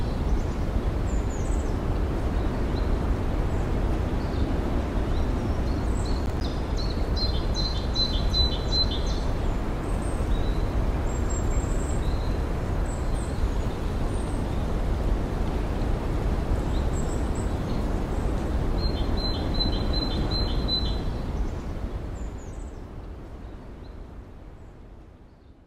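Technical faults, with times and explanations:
6.26–6.44 s, processor overload crackle: a handful of missed buffer deadlines leave silent gaps of roughly 10 ms with hard edges, showing as waveform dropouts and broadband vertical spectrogram streaks.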